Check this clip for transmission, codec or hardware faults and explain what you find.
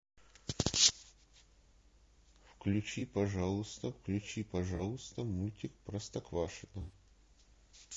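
Two faults show up: coarse low-delay coding throughout and three short dropouts patched over by the decoder.

Throughout, the speech is rough and grainy, with noise filling the gaps between harmonics and a thin, synthetic-sounding top band. The likely cause is low-delay AAC compression (AAC-ELD): its short frames resolve pitch harmonics poorly, and at a rate around 32 kbps the damage is plainly audible.

At 2.99–3.02 s, 4.75–4.81 s and 6.81–6.93 s, AAC frame loss with concealment occurs. The decoder rebuilt the missing stretches of 20, 40 and 80 ms from the last good spectrum, consistent with one, two and four lost frames. Each gap sounds like a brief smeared, noisy or phasey patch, longest at the end.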